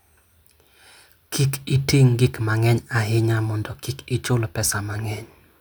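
No technical faults are audible.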